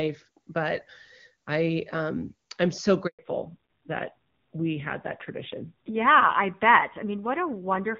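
At 3.07 s the call is passed from one network link to another, and no speech frames arrive during the switch. This handover gap leaves the speech cut off abruptly, with 120 ms of silence until 3.19 s, and whatever was said in that span is simply missing.

From 3.19 s to the end, the connection falls back to narrowband coding. The clear HD Voice quality before the break gives way to a duller, rougher sound with nothing above 4 kHz, consistent with a low-rate narrowband codec around 7.4 kbit/s.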